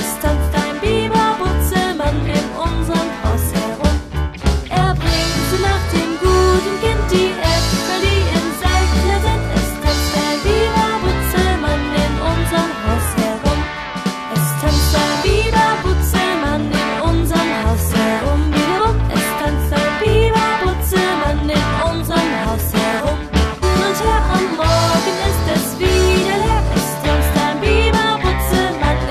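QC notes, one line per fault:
23.62 s, stream segment skipped: the sound suddenly jumps ahead with a small blip, so a stretch of the programme just isn't there. Most likely one chunk of a segmented stream failed to load and the player carried on with the next one.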